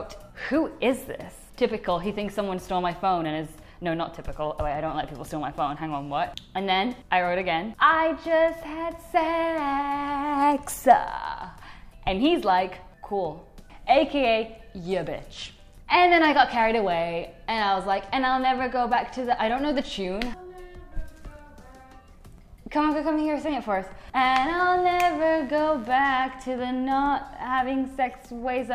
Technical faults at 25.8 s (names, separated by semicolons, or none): mains buzz